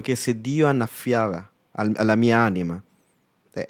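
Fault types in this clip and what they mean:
Lost packet rebuilt from error correction: at 1.13 to 1.15 s the speech turns briefly rough and noisy for about 20 ms, with no gap, which fits a single lost packet whose low-bitrate copy, carried in the next packet, was decoded in its place.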